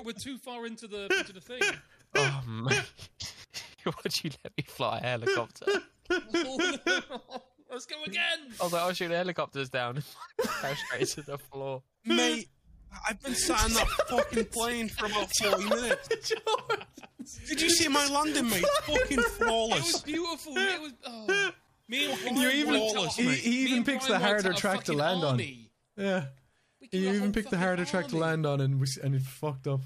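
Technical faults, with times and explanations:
27.44–28.30 s, Bluetooth SBC bit pool drop: the treble dulls and a gritty, grainy noise rises, which fits the link cutting the bit pool from 31 to 14 (near 99 kbps). On a spectrogram the upper bands thin out, and coarse quantisation noise appears below.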